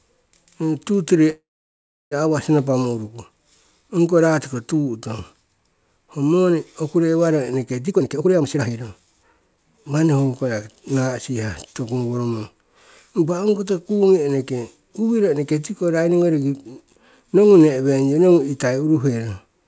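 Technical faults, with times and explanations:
1.30–2.13 s, call audio freeze: the sound stops moving forward and the last fragment is stretched into a short fading buzz, which gives way to about 0.68 s of silence before the audio resumes exactly where it left off. Nothing is lost. The delivery simply stalls for about 0.81 s. This is most likely late packets draining the jitter buffer, with the receiver padding the gap until data arrives and everything after it shifted later.
7.85–10.08 s, jitter buffer speed-up: the sound runs at about 136% of normal rate while the pitch stays the same, giving a rushed, clipped delivery. The buffer holds more audio than its target. The receiver works that excess off by cutting many short pitch-period slices in succession, roughly 0.7 s in total, so the playout delay shrinks back toward normal. The whole clip is band-limited to 8 kHz, which fits the G.722 wideband codec on this call path.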